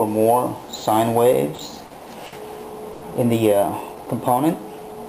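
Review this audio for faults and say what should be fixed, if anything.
Four short stalls from late packets occur, at 1.55 to 1.61 s, 1.86 to 1.93 s, 2.26 to 2.35 s and 2.93 to 3.05 s. Each time the jitter buffer ran dry. The last sound was held for 30, 40, 60 and then 90 ms until the packet arrived. Nothing is lost, but each sound drags slightly. A deeper jitter buffer or a steadier network path would prevent these stalls.

A jitter buffer slow-down runs from 3.95 to 4.94 s. The receiver repeated small slices of sound to rebuild its reserve. It added about 93 ms, so the audio plays at 91% speed with unchanged pitch. Sounds are drawn out. Keeping the buffer's target delay stable would avoid this stretching.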